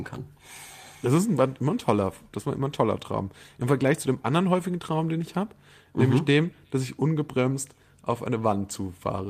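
No technical faults can be heard at any point in the recording.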